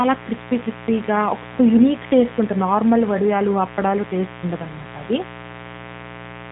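A steady, raspy buzz runs under this speech from start to finish, fairly loud at roughly 15 dB below the voice. It is mains buzz, with sharp switching spikes twice in every 60 Hz cycle and their harmonics getting in through a dimmer, rectifier or poor shielding. The voice also sounds thin, buzzy and plainly synthetic throughout, with nothing above 3.8 kHz. That points to the AMR narrowband mobile codec at a mid-range bitrate near 10 kbps, where a coarse vocal-tract model replaces the real waveform.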